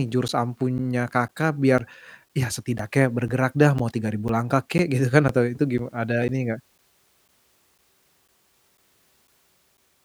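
A speech recording carries periodic USB or driver dropouts from 0.28 s to 9.78 s. Every 0.5 s a short stretch of audio, around 10 ms, goes missing and is replaced by silence, giving about twenty regular ticks that are heard only while sound is present. On a waveform each appears as a brief flat gap cut into the signal. On a spectrogram it shows as a thin vertical gap edged by broadband clicks. The steady spacing points to a background task stalling the bus or audio driver.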